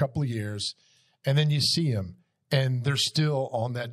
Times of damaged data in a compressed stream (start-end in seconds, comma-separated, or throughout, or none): none